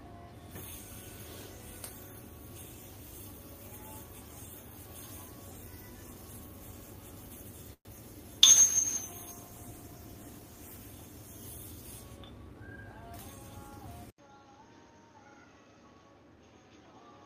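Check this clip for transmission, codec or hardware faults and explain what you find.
Four faults are audible, all from 7.7 s onward.

From 7.73 to 7.87 s the sound stalls: what was playing trails off as a fading buzz or hiss and then drops to about 80 ms of silence before resuming exactly where it left off. This is a call audio freeze, most likely caused by packets arriving late and the jitter buffer running dry. The receiver covered the wait with roughly 117 ms of extended and then empty audio. Nothing was lost, but the stream now runs that much later.

From 8.49 to 10.91 s the audio turns coarse and watery, with the top end dulled, for about 2.35 s before clearing. This is a call bitrate drop. The bandwidth estimate fell and the Opus encoder was pushed from 64 kbps to 22 kbps. At that rate it quantises the spectrum roughly and trims high frequencies to save bits, which causes the grainy, muffled character until the rate climbs back.

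Between 12.17 and 12.84 s the sound hurries forward at about 114% speed while keeping its pitch. This is a jitter buffer speed-up. The buffer had built up more delay than its target, so the receiver cut out short pitch-period slices one after another, about a tenth of a second in total. The result is a brief rushed patch rather than a pitch shift.

At 14.10 s there is about 80 ms of silence, after which the sound stays duller and boxier to the end. Nothing reaches above 6.6 kHz, the level is about 5 dB lower, and a new noise floor sits about 45 dB beneath the signal. This points to an input switched to a poorer device, likely a change to another microphone or a headset's call profile. Its narrower band, different gain and own self-noise account for the change in tone.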